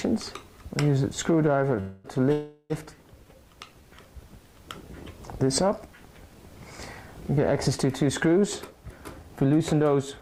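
At 1.80 s the sound stalls and turns into a fading buzz or hiss. It holds until 2.07 s. A second, longer stall runs from 2.32 to 2.73 s. Both are a call audio freeze. Packets were likely held up in transit, so the jitter buffer ran dry. The receiver stretched the last sound to fill about 240 ms and then about 380 ms. Nothing was lost. The audio resumes where it stopped, just later each time.

From 8.70 s to the end, at 10.22 s, the audio hurries. This is a jitter buffer speed-up. The buffer held more audio than its target. To shrink the delay, the receiver cut many tiny pitch-period slices in a row, roughly 150 ms in total. Playback runs about 8 percent fast. The pitch stays the same, but the pace sounds rushed.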